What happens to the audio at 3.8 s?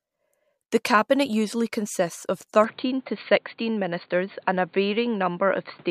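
At 3.8 s the sound is in the middle of a stretch that runs from 2.64 s, just after "cabinet usually consists of", to the end: nothing is left above 4.6 kHz, so it turns dull, with a fresh, faint background noise about 40 dB down. The change is abrupt, with no gap and no jump in level. That points to the input likely switching to a poorer device, rather than a plain filter, which would bring no new noise of its own.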